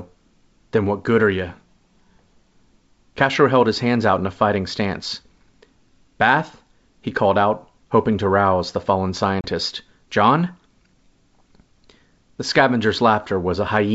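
At 9.41 s, just after "to rouse the fallen", there is packet loss on an ADPCM call. About 30 ms of audio, a few packets' worth, drops out to silence with hard edges. The decoder's predictor and step size no longer match the sender's. So the speech comes back with brief, slight distortion. It settles within tens of milliseconds. The wideband coding itself sounds clear, which fits G.722 at 64 kbit/s.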